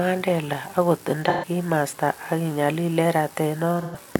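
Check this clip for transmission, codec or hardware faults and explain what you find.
Two short faults are audible in the speech. AAC frame loss with concealment occurs at 1.29–1.45 s and again at 3.81–3.97 s. Each gap lasts about 128 ms, which fits three lost frames. The decoder bridges each gap by reusing the last good spectrum, so the speech turns briefly smeared, noisy or phasey rather than falling silent.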